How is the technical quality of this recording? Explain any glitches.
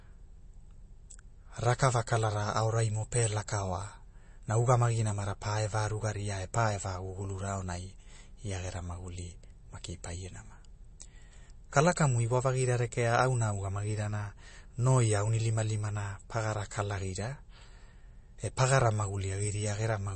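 The technical quality is poor: plainly audible codec damage runs through the whole recording. From start to finish the speech sounds watery and swirly, with nothing above 8.3 kHz. This is likely MP3 compression at a low bitrate, around 32 kbps, which zeroes weak frequency lines and cuts the treble.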